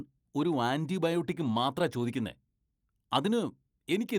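From 1.01 s to 2.29 s a call bitrate drop degrades the speech. The coding turns coarse and watery and the top end dulls for about 1.2 s, which fits the encoder falling from around 64 to 24 kbps after a reduced bandwidth estimate.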